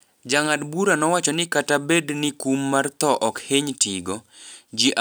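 No dropouts, clicks, distortion or other transport faults turn up anywhere in the recording.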